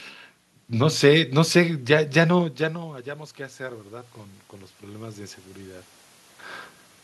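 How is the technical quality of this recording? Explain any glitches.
The recording has one recurring glitch: automatic gain rising, twice. Around two and a half seconds in, the talker drops back and the input falls by about 18 dB. The AGC notices the quieter level and slowly boosts its gain, about 5 dB from 2.59 to 4.19 s, then about 4 dB more from 4.8 to 5.94 s. You hear the voice and the room noise swell up together over a second or so each time. The talker moves again at around six seconds; that's just movement, not a fault.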